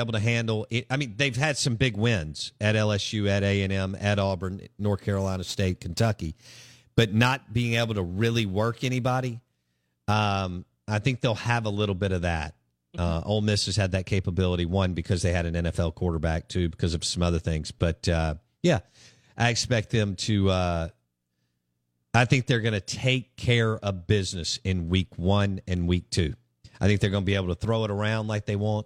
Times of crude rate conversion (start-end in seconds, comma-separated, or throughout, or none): 4.40-10.13